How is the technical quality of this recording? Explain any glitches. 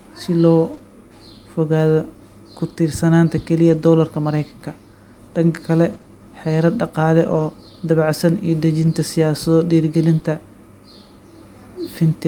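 The recording has network glitches at a few points, all short.

Lost packet rebuilt from error correction: at 0.73 s, and again from 3.69 to 3.83 s, audio packets were dropped. The decoder replaced each from a low-bitrate copy carried in the next packet. The second stretch holds about 80 ms of rebuilt audio, which fits four separate packets. There is no gap, but those moments sound rougher and noisier.

Short concealed packet loss: from 0.77 to 0.81 s, right after the first rebuilt moment, about 20 ms of the speech arrived too late to use. The receiver filled the hole by extending the preceding sound and then blending back into the real audio. This leaves a brief smear or wobble.

Scattered short gaps: between 5.93 and 10.25 s, roughly three isolated packets went missing. The longest was about 20 ms. The receiver patched each by continuing the last sound, covering only about one percent of that span. 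The speech stays clear, with a few ticks or hiccups.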